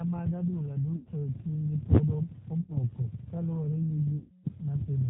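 Across the whole speech clip the sound is band-limited to 4 kHz and slightly rough and synthetic, the plainly audible signature of the G.729 codec, which points to an 8 kbit/s stream. Unlike wideband compression, it is steady and pulse-coded, not watery.

VoIP packet loss concealed by the speech codec hits at 0.96–1.08 s, 2.61–2.79 s and 4.18–4.46 s, covering about 100, 80 and 260 ms. Rather than silence, the gaps fill with a fading extrapolation of the voice that lingers weakly after audio returns.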